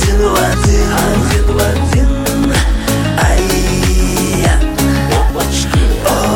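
At 0.54, 2.44, 3.40 and 5.30 s the sound skips forward by about 50 ms on a roughly one-second grid, likely audio missing between chunks, with the sides butted together.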